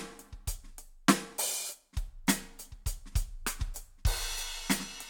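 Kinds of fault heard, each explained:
No faults can be heard in this music clip. No working path is listed, so there is nothing further to describe.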